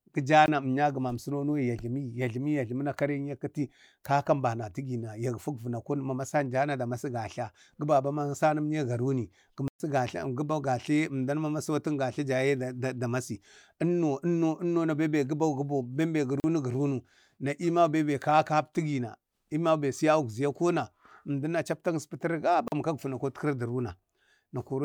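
Speech with blocks of digital silence at 0.46 s (about 20 ms), 9.68 to 9.8 s (120 ms), 16.4 to 16.44 s, and 22.68 to 22.72 s between "chapta astafan" and "kak vəna" (40 ms each). Unlike a fade-out or concealed loss, each gap starts and ends abruptly, which suggests output buffers not filled in time.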